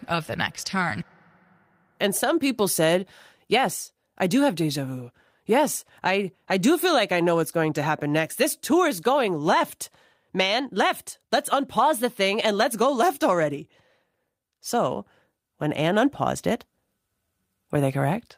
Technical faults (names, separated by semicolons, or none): none